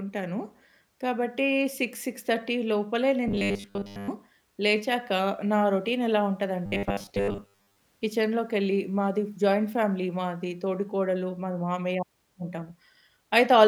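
Robotic sound from repeated short buffers hits this speech at 3.28 to 4.09 s and 6.66 to 7.81 s: a rigid metallic 100 Hz buzz, likely from audio arriving too seldom so a roughly 10 ms stretch is replayed for most of each passage instead of new sound.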